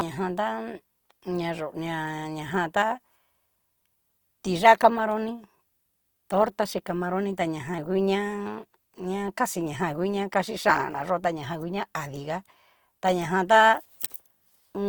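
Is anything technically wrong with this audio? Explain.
Yes. Across the whole speech clip there's plainly audible Opus compression, likely in CELT mode at a rate that fits 24 kbps. Starved bands get refilled with folded or noise content, so tones turn grainy and rough, though the bandwidth still reaches 20.2 kHz.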